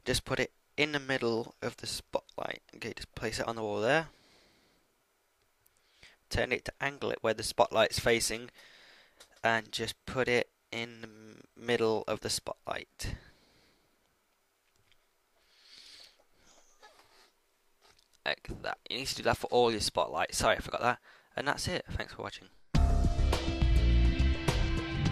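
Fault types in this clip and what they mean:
Nothing here stands out as a technical fault; the audio holds steady the whole way with no dropouts, glitches or distortion to point to.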